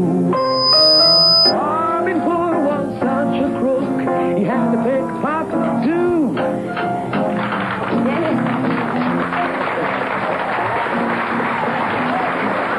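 Loudspeaker feedback squeal from 0.36 to 1.55 s: a 5 kHz tone swells in under half a second to a few dB above the sound, as the mic-speaker loop runs away.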